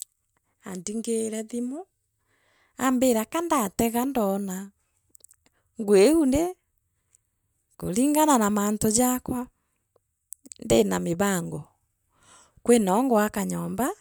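Nothing in this speech recording stood out as a technical fault on listening.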